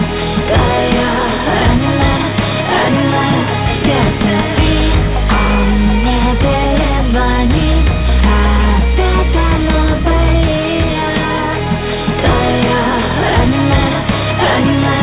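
Nothing stood out on listening, and the sound keeps to the narrow band of a telephone-style call path, with nothing above 4 kHz.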